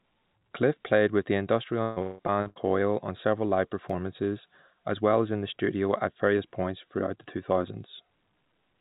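Repeated packet loss (robotic sound) affects this speech recording from 1.82 to 2.58 s, between "played with the" and "on several live". Five holes, the longest 164 ms, are bridged by stretching the preceding sound, so about 58% of that stretch is synthetic fill, heard as choppy sound with pieces missing. An underrun with held sample follows at 3.90 s, just after "on several live". The output briefly freezes flat for about 1.3 ms. Roughly 1.5 ms of live sound is skipped. Throughout, the band stops at 4 kHz, consistent with a G.711 A-law call path at 64 kbps.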